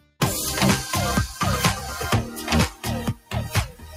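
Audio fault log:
throughout: noise suppressor applied to music or sounds. A speech-tuned suppressor stays active, treating sustained, steady parts of the sound and their tails as noise, so the level swings by about 15 dB as it clamps down and lets go. Sharp onsets pass while held portions sink, giving a pumping, thinned texture. Unlike a plain compressor, the gain moves with how noise-like the sound is, not with how loud it is.
0.00–0.21 s, 2.70–2.86 s, 3.14–3.34 s, 3.68–3.96 s: sound cut by the noise suppressor. In these spans the suppressor judged the steady or decaying material to be noise and pulled it down harder than elsewhere, by about 18, 11, 16 and 13 dB at the deepest. They last about 200, 150, 200 and 300 ms. Unlike a dropout, the sound sinks and its decay is cut short rather than vanishing abruptly.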